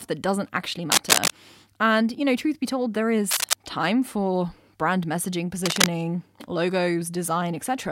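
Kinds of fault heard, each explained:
Cable scratch noise: three brief bursts of dense, irregular scratching ride over the speech at 0.92–1.32 s, 3.31–3.54 s and 5.65–5.86 s, the first and last somewhat louder than the speech, the middle roughly level with it; likely a worn cable or connector shifting, its contact resistance fluctuating rapidly.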